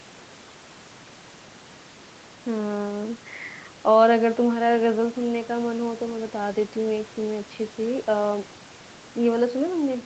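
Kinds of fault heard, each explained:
Nothing stood out on listening to this speech, whose content stops at about 8 kHz as it passes through the call's microphone processing and Opus codec.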